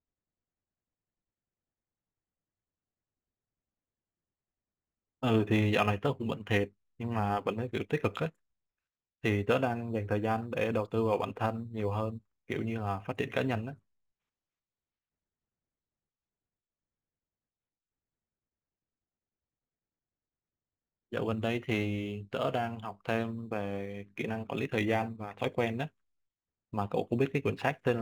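From start to finish the speech carries a crude rate conversion. The pattern fits a 44.1 kHz stream pushed up to 48 kHz by simply repeating the nearest sample now and then, with no filtering. Those duplicated samples recur on a fixed cycle set by the two rates, producing shifted, inharmonic copies of the voice. You hear it as a gritty, inharmonic fizz riding on louder and brighter syllables, roughly 30 dB below the speech.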